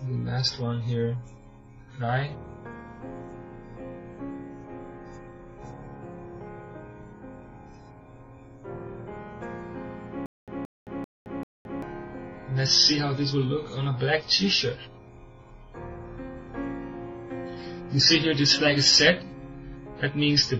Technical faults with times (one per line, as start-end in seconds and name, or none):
10.26-11.82 stutter with silent gaps